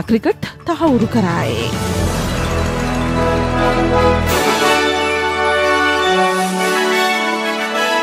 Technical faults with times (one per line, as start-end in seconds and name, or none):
none